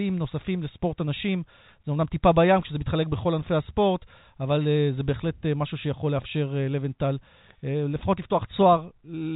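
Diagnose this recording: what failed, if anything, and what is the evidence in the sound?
Nothing failed in this recording.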